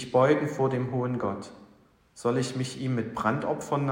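No technical fault can be heard anywhere in the audio. There are no problem moments to time and no cause to trace.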